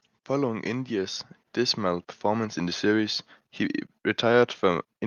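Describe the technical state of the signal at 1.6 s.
At 1.6 s the level is partway through a slow swell: the speech and the background noise beneath it grow louder together, with no change in the balance between them. That is automatic gain rising, running from 0.44 s to 2.9 s. The gain control judged the incoming signal too quiet and raised its amplification gradually, lifting everything it passed by about 6 dB over those two and a half seconds.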